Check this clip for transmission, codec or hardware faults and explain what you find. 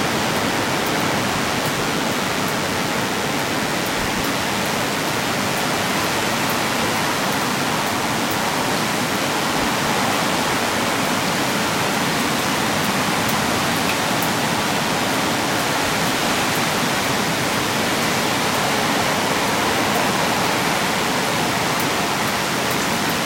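One fault runs through the whole clip: DECT cordless phone buzz. A nearby handset or base transmits a short radio burst every 10 ms, and the audio circuitry rectifies it. The result is a thin, steady 100 Hz buzz, rich in harmonics and not far below the sound. Mains hum sits at 50 or 60 Hz and sounds smoother, while this buzz has a gated, rasping edge.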